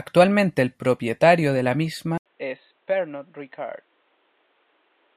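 The recording input was likely switched to a poorer device partway through this speech clip. At 2.18 s, right after "el propietario de la", an 80 ms gap marks the changeover. From there to the end the band stops at 4.1 kHz, so the sound turns dull and boxy. The level drops by roughly 10 dB, and a new background hiss sits about 40 dB under the signal.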